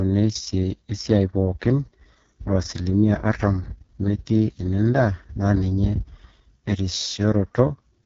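From start to finish the speech carries AMR wideband (HD Voice) codec damage, and it is heavy. The sound is rough and raspy throughout. That grit fits the codec's lowest rate, around 6.6 kbit/s. At that rate too few pulses model each stretch of speech, so detail breaks up. Nothing sounds above 7.2 kHz. The top band, roughly 6.4 to 7 kHz, is filled with shaped noise rather than real signal. It adds a hiss-like edge.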